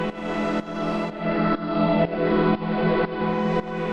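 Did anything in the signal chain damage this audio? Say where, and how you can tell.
Yes. From 0.96 s to 3.55 s the sound turns dull and a faint hiss appears, roughly 35 dB below the programme, with the level shifting by about 2 dB. Each transition is a smooth 350 ms cross-fade rather than a hard cut. This is digital radio blending to analogue in the receiver: the hybrid tuner lost the digital stream, faded to the station's band-limited AM broadcast, then faded back.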